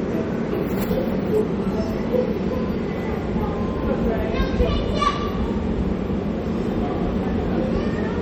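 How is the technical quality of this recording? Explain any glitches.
The quality is clearly compromised throughout by what is likely MP3 compression, and the damage is plainly audible across the whole recording. The texture sounds watery and swirly, with metallic chirps on bright sounds and smeared attacks, which fits a bitrate around 48 kbps. A starved encoder cuts the treble and drops weak frequency lines from frame to frame. On a spectrogram, a flat ceiling appears where the highs stop, with scattered holes flickering below it.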